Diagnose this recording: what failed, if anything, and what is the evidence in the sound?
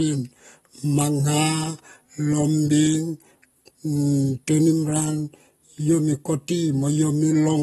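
Codec stage: AAC compression likely caused the dull, smeared speech throughout. The spectrogram shows a hard ceiling near 12.5 kHz, which fits roughly 32 kbps.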